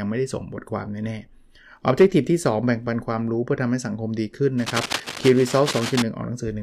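Cable scratch noise runs from 4.57 to 6.02 s, a stretch of dense, uneven crackle and rustle lying over the speech for nearly one and a half seconds, sitting roughly 10 dB below it. The likely cause is a worn cable, connector or control being moved, so that the contact resistance jumps about rapidly and injects irregular bursts of noise into the signal, heard as scratching that rides on top of the speech rather than replacing it.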